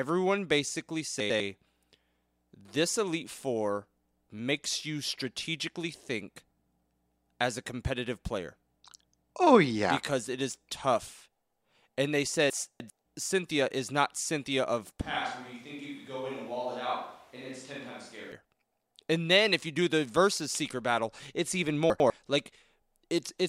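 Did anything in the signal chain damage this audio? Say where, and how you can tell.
Yes. Two kinds of fault are audible.

Chunks out of order, at the buffering stage where audio is delivered or written in blocks. At 1.2 to 1.4 s the sound jumbles for a moment. One 100 ms chunk plays one chunk late. At 12.5 to 12.9 s a 100 ms chunk lands three chunks late, so the scramble lasts longer. At 21.9 to 22.1 s, just after "seeker battle it's even", one chunk is again one late. Nothing is missing. The order is wrong, and each event leaves three hard joins.

Switch to a distant microphone, at the capture stage. From 15.01 to 18.32 s the speech suddenly turns roomy and hollow. The bass thins. The level drops by about 10 dB. Background noise rises to about 25 dB below the speech. The change in and the change back are both abrupt. The likely cause is that the close microphone's signal was lost and a farther one, such as a camera microphone, filled in.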